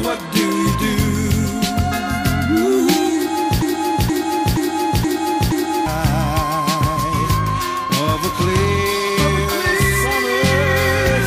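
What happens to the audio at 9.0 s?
Nothing goes wrong at 9.0 s: the audio carries straight through that moment without a dropout, click, glitch or other audible fault.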